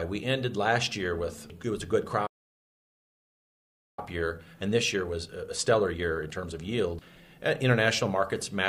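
A playback stall runs from 2.26 s to 3.99 s. The audio breaks off mid-flow and stays silent for 1.71 s, likely because the player's buffer ran dry or its output thread was blocked, until playback recovers and sound returns. Time-compressed catch-up follows from 3.99 s to 6.99 s. The player works through the backlog that built up during the gap by cutting out short slices and cross-fading across the joins. The audio moves at 1.15 times normal speed with its pitch unchanged.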